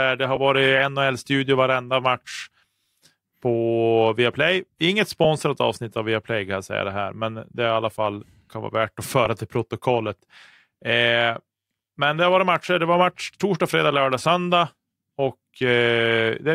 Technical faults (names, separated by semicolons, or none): lost LE Audio frames